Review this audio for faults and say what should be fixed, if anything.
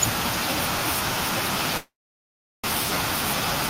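From 1.77 to 2.68 s the speech decays into a fading buzz, then about 0.74 s of silence, returning with roughly 0.6 s missing and shifted around 300 ms: likely a long network dropout. Unlike a brief packet-loss glitch, concealment gives out and content is skipped. Stronger redundancy and adaptive buffering would prevent it.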